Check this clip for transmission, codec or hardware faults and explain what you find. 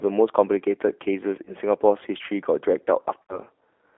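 Two things show up: the whole clip is coded through G.729, and there are two dropouts patched over by the codec's packet loss concealment.

The G.729 codec runs throughout. The speech sits in a narrow band of about 300 Hz to 3.4 kHz, with the slightly rough, synthetic edge you get when a decoder rebuilds the voice from a filter, pitch predictor and a few pulses. That's consistent with an 8 kbit/s G.729A link, and the damage is plainly audible.

VoIP packet loss concealed by the speech codec hits at 1.45 to 1.51 s and again at 3.23 to 3.38 s. About 20 ms goes missing in the first and 60 ms in the second, which points to one lost packet and then three in a row. Each time, the decoder keeps extrapolating its last pitch and filter with falling gain, so the sound smears into a buzzy tone or coloured noise that fades. Because each frame builds on the one before it, the speech stays weak or off for a moment after the packets come back.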